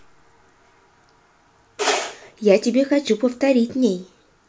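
No technical faults can be heard anywhere in the recording; the signal stays continuous and intact throughout.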